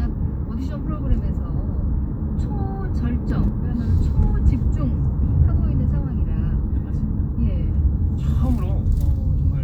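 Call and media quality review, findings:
Sudden gain jump, 3.30–3.48 s. Likely cause: digital gain stage switching value between adjacent samples with no ramp applied. Level of the sound and the background noise steps up together by about 4 dB for 0.18 s, then drops back abruptly.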